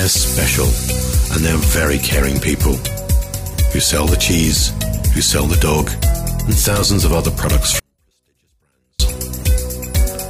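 From 7.79 to 9.00 s the sound suddenly drops about 48 dB, almost to nothing, yet stays clean. That's a 24-bit alignment error (too quiet): 24-bit samples sitting in the low bytes of a 32-bit word got read as full 32-bit values.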